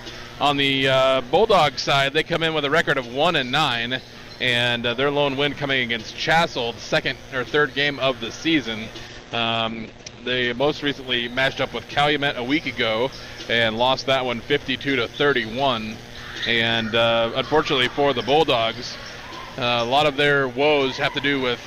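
From 9.12 to 13.21 s there's a call bitrate drop. The encoder starved for bits, so the top end shrinks from 20 kHz to 8 kHz and things turn muffled and watery, bottoming out for about 1.2 s, which fits a fall to roughly 12 kbps.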